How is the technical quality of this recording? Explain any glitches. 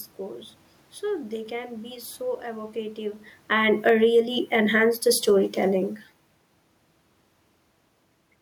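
Two gain faults overlap in the middle of the speech.

From 3.36 to 5.98 s, just after "can be so evocative", there is automatic gain falling. The gain control judged the input too loud, or its background noise too strong, and turned itself down by about 8 dB. Voice and room noise sink together over more than two seconds.

From 4.13 to 5.13 s, automatic gain rising cuts across that fall. Here the control judged the input too quiet and raised its gain by about 5 dB over one second. The voice and background swell briefly together, then resume sinking.

The level shifts near 3 s and 6 s come from the talker moving relative to the microphone, not from the system. The room noise belongs to the recording space.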